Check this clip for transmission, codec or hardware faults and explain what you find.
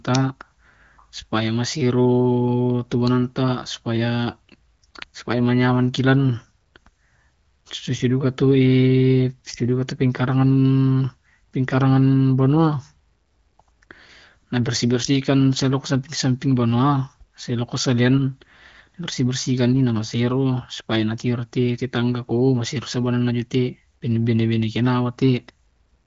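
Nothing here sounds wrong: it's speech carried over the AMR wideband (HD Voice) codec, with the top end stopping at about 7.2 kHz as that path does, and no dropouts, glitches or hardware trouble turn up anywhere in it.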